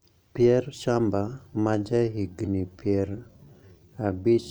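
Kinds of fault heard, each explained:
Time-stretched section: from 1.51 s the speech slows to about 0.72 speed, pitch unchanged, likely from stretching software. It drags, with spectrogram harmonics widening horizontally.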